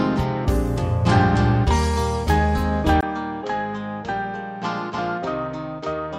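The audio changes character abruptly at 3.01 s: after a gap of about 20 ms, everything to the end sounds duller and boxier, with nothing above 7.7 kHz, a level roughly 10 dB lower, and a new background noise sitting around 40 dB below the signal. This is likely an input switched to a poorer device. A bandwidth drop from a codec or filter alone would not bring its own noise floor and level shift, and would not leave a silence at the change.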